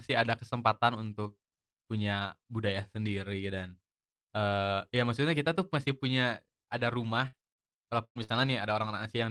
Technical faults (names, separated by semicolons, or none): burst of packet loss; lost packet rebuilt from error correction